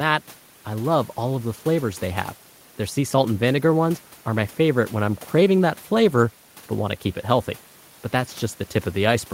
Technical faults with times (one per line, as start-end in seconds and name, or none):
none